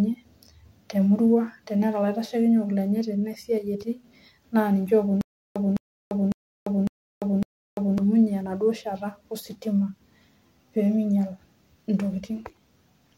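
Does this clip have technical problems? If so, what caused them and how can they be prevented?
Yes. From 5.21 to 7.98 s there is a stutter with silent gaps. A 209 ms fragment repeats five times, each followed by 345 ms of silence. A stalled player or stream likely replayed its last fragment at each retry. More buffering and a steadier connection would prevent it.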